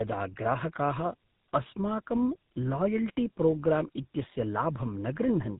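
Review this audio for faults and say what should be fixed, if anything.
Tandem speech coding, throughout: two speech codecs in a row, consistent with AMR-NB then GSM full rate, each re-coding earlier losses. The speech sounds rough, muffled and warbly, with nothing above 3.8 kHz. Prevent it by keeping one codec end to end through transcoder-free operation between networks.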